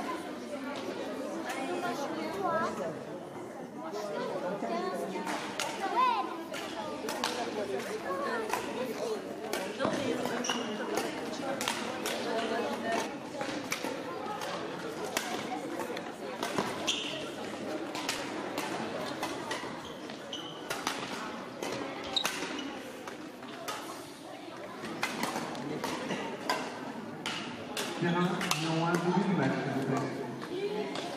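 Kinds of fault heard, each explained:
Train of clicks: from 7.26 s, same-shaped pops at 8.35 per second, unevenly spaced and continuing through pauses, unlike a lone click; likely interference, a faulty connection or power supply.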